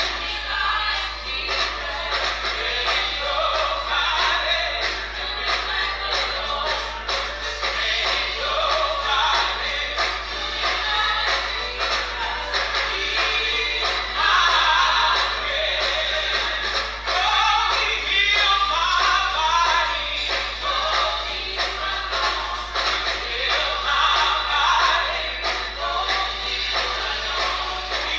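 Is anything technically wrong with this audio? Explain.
No, there is nothing technically wrong with this audio.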